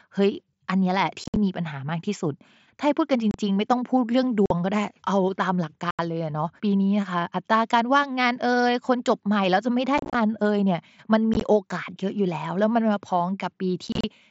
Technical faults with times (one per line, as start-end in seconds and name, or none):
1.24-1.36 unconcealed Bluetooth headset packet loss
3.31-3.34 unconcealed Bluetooth headset packet loss
4.46-4.51 unconcealed Bluetooth headset packet loss
5.91-5.99 unconcealed Bluetooth headset packet loss
9.98-10.15 unconcealed Bluetooth headset packet loss
11.34-11.41 unconcealed Bluetooth headset packet loss
13.87-14.04 unconcealed Bluetooth headset packet loss